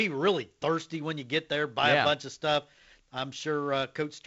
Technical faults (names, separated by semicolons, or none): none